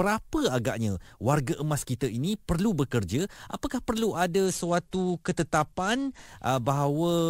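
From 4.45 to 6.26 s, a Bluetooth SBC bit pool drop dulls the speech treble and adds gritty noise. It sounds like roughly 96 kbps, starving upper sub-bands.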